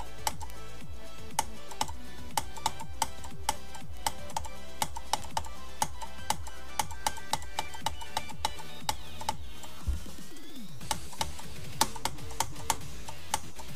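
Bit error spikes tick at 0.50 s, 3.97 s and 5.22 s. Flipped bits push samples briefly to about -18 dBFS, then about -24 dBFS. Each is one sharp broadband click.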